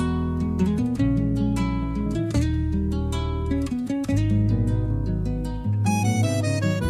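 Nothing goes wrong in this audio; there's no dropout, glitch or distortion anywhere to point to.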